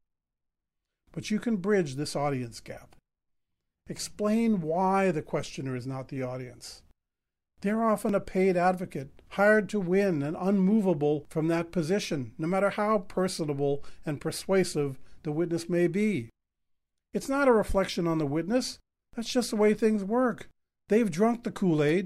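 Speech, with one block of digital silence at 8.09 s. A 1.6 ms run of zeros cuts in and out abruptly, heard as a brief tick, likely from an output buffer left unfilled.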